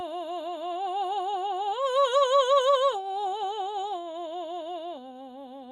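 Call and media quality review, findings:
No faults found in the music.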